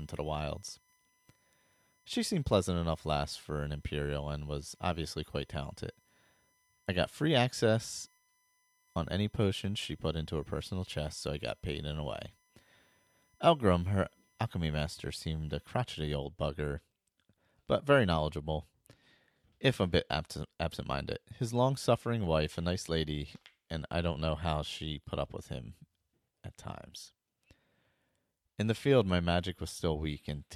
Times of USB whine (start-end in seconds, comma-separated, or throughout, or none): 0.00-15.77